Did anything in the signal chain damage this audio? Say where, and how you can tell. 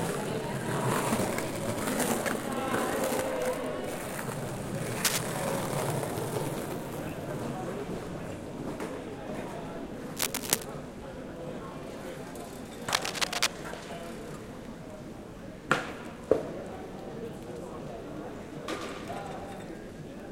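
Yes, in the analogue wiring: a worn cable, connector or control was likely being moved, so its contact resistance jumped about erratically. The result is cable scratch noise, dense and uneven bursts of scratching and rustling laid over the audio at about 5 dB above it, from 5.05 to 5.20 s, 10.16 to 10.65 s and 12.93 to 13.47 s. The irregular texture and abrupt onsets mark it as a contact problem.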